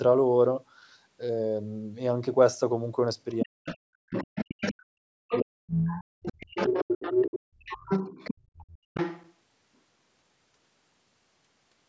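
This is a speech recording from a call, with its top end stopping at 8 kHz, and it has some echo-canceller trouble. The other side's voice leaking through shows up in scraps from 3.31 to 3.77 s and 4.13 to 4.74 s, roughly 10 dB under the talker, then for a long stretch from 5.29 to 9.31 s at only about 5 dB down. Likely cause: the loudspeaker's playback was reaching the mic and wasn't fully cancelled. Speech suppressed in double talk hits from 3.44 to 5.88 s, with the talker dipping by as much as roughly 40 dB over about two seconds in total, and again briefly at 6.51 to 6.74 s, roughly 30 dB down. That's likely the canceller ducking everything while both sides talked at once. The background gated by the echo canceller drops the room sound out at 6.16 to 6.22 s (about 40 dB, around 70 ms) and at 8.34 to 8.56 s (about 23 dB, around 200 ms). In both spots the canceller clamps down on the mic while the far end plays, then lets go.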